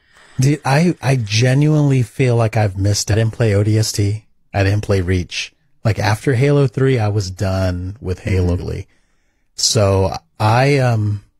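At 8.56 to 8.60 s, damaged data in a compressed stream makes the decoder lose sync and search for the next frame header, producing a brief glitch.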